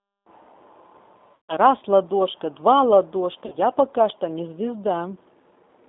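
The whole clip runs through a G.729 codec, squeezed into roughly 200 Hz to 3.7 kHz. The speech comes out rough and a bit synthetic, as you'd expect from 8 kbit/s rebuilt speech.

At 1.35 to 1.54 s and again at 3.46 to 3.56 s there's VoIP packet loss concealed by the speech codec. The decoder stretches its last sound into a fading buzz, which fits about 140 ms and 60 ms of missing packets.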